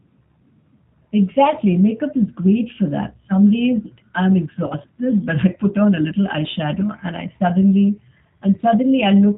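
The speech passes through a G.729 codec throughout, and the sound fits its 8 kbit/s rate: each 10 ms frame is rebuilt from a vocal tract filter, a pitch predictor and a few pulses. Nothing above 4 kHz survives, leaving the speech plainly rough, muffled and slightly synthetic.

From 4.67 to 4.75 s, between "days I'm" and "but I put on", VoIP packet loss concealed by the speech codec occurs. About 30 ms of audio was missing, and the decoder filled the gap by extending its last pitch and filter settings at falling gain. This produces a brief stretched sound that fades, and the voice stays weak or distorted for tens of milliseconds or more after speech returns.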